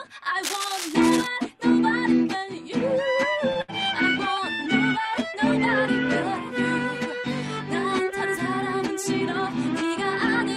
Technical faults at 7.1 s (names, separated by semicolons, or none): none